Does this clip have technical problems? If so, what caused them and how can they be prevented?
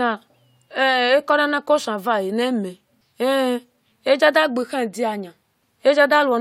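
No, nothing stood out as a technical problem on listening to this speech clip.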